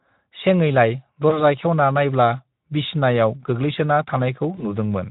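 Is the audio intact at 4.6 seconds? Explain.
No. VoIP packet loss concealed by the speech codec affects the speech from about 4.55 to 4.66 s, with roughly 20 ms of audio actually missing, which fits a single lost frame. The decoder filled the gap by extending its last pitch and spectral shape at a falling level, so the speech briefly smears into a buzzy or tinted fade. Because the decoder's state must rebuild, the speech sounds weak or rough for a short while after the gap.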